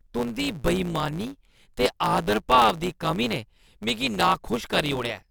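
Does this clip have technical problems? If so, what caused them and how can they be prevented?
Yes. The speech carries a block size mismatch (truncated) from start to finish. One processing stage hands over longer blocks than the following stage consumes, so the tail of every block is discarded. Each cut leaves a small discontinuity, and these repeat to form a steady buzz at about 109 Hz. Dropping that portion of every block also makes the speech run about 1.09 times fast while its timbre stays. Prevention: configure every stage in the chain to use the same block size, or place a proper buffer between stages so no samples are dropped.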